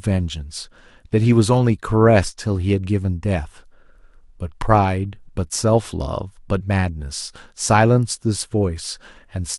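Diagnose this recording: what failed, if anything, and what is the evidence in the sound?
A jump at 6.6 s, where the speech lurches forward by roughly 50 ms. The failure lies at the codec stage: compressed frames were skipped, about two of them, either missing from the file or rejected by the decoder as damaged.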